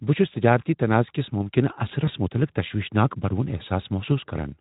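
Around 2.05 s there's a bit of VoIP packet loss concealed by the speech codec. About 20 ms goes missing, which fits a single lost frame. The decoder stretches its last pitch and filter into a brief buzzy smear that fades, leaving the speech thin until about 2.11 s.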